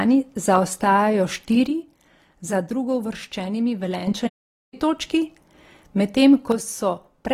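From 1.67 to 4.07 s the speech level falls abruptly by about 6 dB, likely one channel dropping out before the mono sum. The waveform envelope halves in height. At 4.27 s a playback stall, likely the player starving for data, cuts the sound to flat silence for about 0.45 s. A blank gap appears across the spectrogram until 4.74 s. The same one-channel dropout returns from 6.52 s to the end, with the same step down of about 6 dB.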